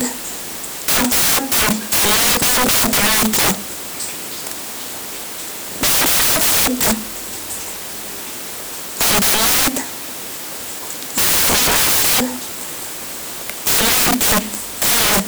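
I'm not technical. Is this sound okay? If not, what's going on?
No. Samples built from the wrong bytes, throughout: the player pieces each sound value together wrongly, so the speech becomes loud hiss.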